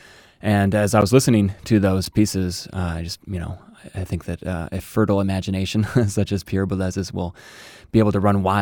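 Two brief ticks cut into the speech, one at 1.01 s between "as I" and "was listening to", and another at 2.05 s after "I was listening to" and before "pieces uh I just". Each is a block of digital silence, a hole of about 10 ms and about 8 ms where the sound cuts out and back with no fade. The likely cause is the program failing to fill its output buffer in time.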